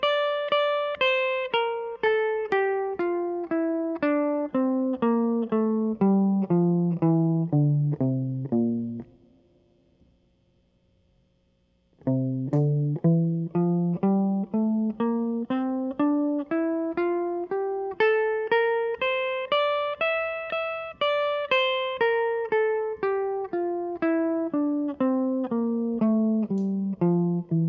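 Nothing in this piece of music stands out as a technical fault; it just carries on without any glitch worth pointing to.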